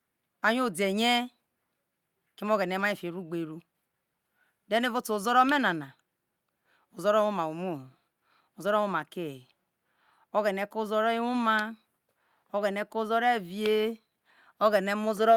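No technical fault can be heard anywhere in this recording of speech, and the signal holds steady and intact from its opening moment to its last.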